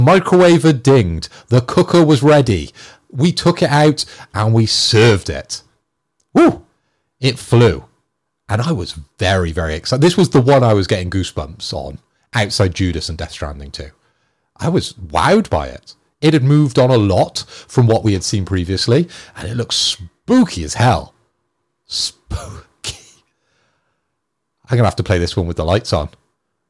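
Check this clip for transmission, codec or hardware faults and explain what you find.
Nothing stood out on listening to the speech in this recording.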